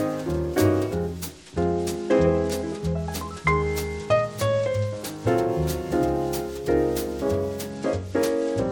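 A Bluetooth SBC bit pool drop at 1.30–5.27 s and from 7.70 s starves the high sub-bands. Treble dulls and turns gritty, and the spectrogram's top band empties.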